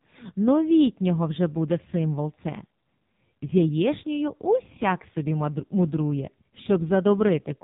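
From the first second to the last, the speech carries the sound of the AMR narrowband mobile codec, and heavily so. Nothing passes above about 3.8 kHz, so sibilants and consonant detail are gone. The buzzy, synthetic texture points to a low bitrate, around 5.9 kbps, where the codec rebuilds the voice from a simple vocal-tract model excited by only a handful of pulses per subframe, leaving little of the natural waveform.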